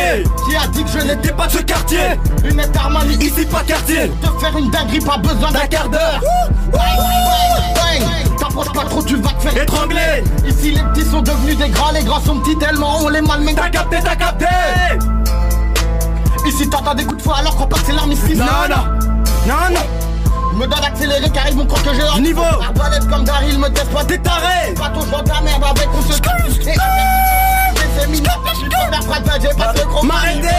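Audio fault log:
6.73–8.95 s, doubled audio track: for just over two seconds a second full-band copy of the sound trails the original by roughly a third of a second, sitting a few dB quieter, maybe around 5 dB down. It's a clean duplicate with no decay tail and no room colour, so it reads as a hard slapback rather than an echo, and it cuts in and out abruptly at both edges. Likely cause is a slower second capture path or an edit leaving two offset copies.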